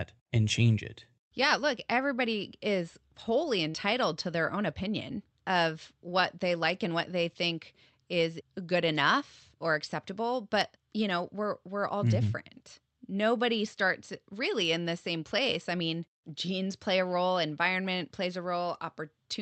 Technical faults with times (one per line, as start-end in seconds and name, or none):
3.69-3.76 short concealed packet loss